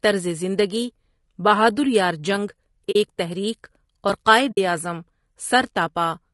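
A speech recording whose voice sounds rough and grainy the whole way through, with a hiss-like fill between the pitch harmonics and a thin, somewhat artificial top band. This is likely low-delay AAC compression (AAC-ELD) at a bitrate around 32 kbps, where too few bits are left to code the spectrum finely. On a spectrogram the harmonic stripes look smeared and speckled, with noise filling the gaps and a blotchy, uneven upper region. The voice also drops out twice, an AAC frame loss with muting. The first gap runs from 2.91 to 2.96 s, just before "ایک تحریک", and lasts about 40 ms, which fits two lost frames. The second runs from 4.51 to 4.58 s, about 60 ms, pointing to three frames. In each case the decoder zeroed the missing spectrum and the overlapping windows faded the sound out and back in, so the holes have soft edges. They show as short tapered dips to silence in the waveform and narrow blank vertical bands on the spectrogram.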